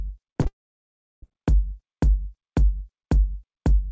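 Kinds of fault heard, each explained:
Short concealed packet loss: two gaps of about 40 ms, at 0.32 and 0.41 s, were bridged by extending the preceding sound, leaving brief smears.
Long network dropout: from 0.47 to 1.24 s a fading continuation gives way to about 0.7 s of silence, likely because packets never arrived.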